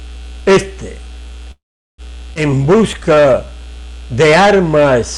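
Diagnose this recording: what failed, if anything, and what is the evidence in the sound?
Call audio freeze at 1.51 to 2.01 s, a network fault: the jitter buffer likely ran dry while packets were delayed. The sound stops, mostly silent, then resumes intact.

Skip ahead at 2.34 to 2.39 s, network or jitter buffer: about a tenth of a second of audio is dropped, and the two sides are joined almost directly.

Jitter buffer slow-down at 2.50 to 3.47 s: the buffer repeats pitch periods to rebuild its reserve, adding 101 ms, so the sound plays at 90% speed with unchanged pitch.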